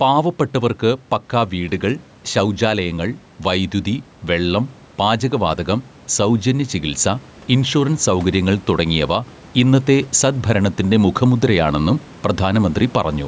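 Gain pumping runs throughout this speech clip: the level is pulled down under each loud syllable, a swing of about 10 dB, with room noise about 30 dB below the speech. The likely cause is excessive input gain driving a fast limiter.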